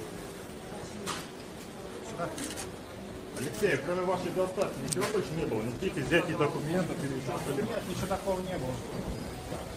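Throughout the clip the pacing feels faintly unsteady. This is clock drift between sender and receiver: the sender's clock runs roughly 3 percent slow, so the receiver's buffer keeps draining.

From 0.55 s to 9.50 s the sound drags slightly, with faint hiccups at uneven spacing. These are repeated timing corrections. The receiver repeats short pieces to keep its buffer fed, which leaves playback at 98 percent speed and adds around a fifth of a second overall.

Between 3.44 s and 8.45 s, brief ticks and small smears appear here and there. These are scattered short gaps: about ten tiny holes of roughly 10 ms each, which the receiver patched by extending the preceding sound.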